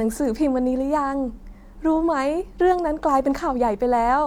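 Nothing in this one trips any alarm, since the talking just carries on from the first moment to the last without a single technical fault turning up along the way.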